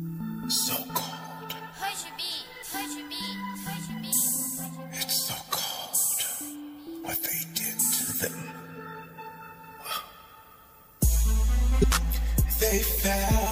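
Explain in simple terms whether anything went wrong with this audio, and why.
Two short blips cut into the sound, one at 4.61 seconds and another at 11.80 seconds, each a brief glitch lasting only a few hundredths of a second. These come from damaged data in a compressed stream: a small piece of the stored file was wrong at those two points. The decoder couldn't read that stretch properly and lost its place until it found clean data again.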